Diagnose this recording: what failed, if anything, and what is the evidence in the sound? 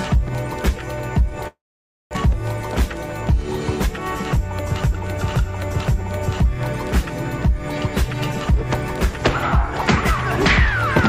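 Network stage, likely a long network dropout: at 1.47 to 2.17 s the last sound is carried on, fades to silence, then resumes with 600 ms missing.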